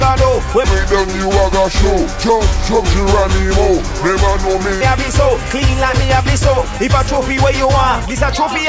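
From 0.64 to 4.81 s the audio plays with a wrong sample rate, running at 0.726 times normal speed and about 5.55 semitones flat, so it sounds low and sluggish. The ratio fits material recorded at 22 kHz being played back at 16 kHz without conversion. On a spectrogram that stretch shows as harmonics and spectral features sliding down in frequency while stretching along the time axis. In the waveform, individual cycles and envelopes look widened by the same ratio.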